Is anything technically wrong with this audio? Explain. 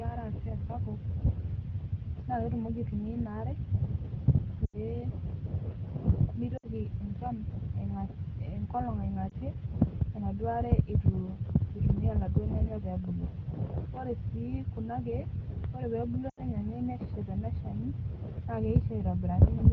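Yes. There are lost AMR speech frames at four points: 4.66 to 4.77 s, 6.57 to 6.67 s, 9.30 to 9.34 s, and 16.30 to 16.42 s. Radio errors corrupt frames, so the AMR wideband decoder, whose light coding fits roughly 12.65 kbit/s, conceals each gap by repeating the last good pitch and vocal tract settings at falling gain. The short 9.30 s gap is a brief dip. The longer gaps, which fit three or four 20 ms frames, smear and fade quickly before the speech returns briefly weak or rough.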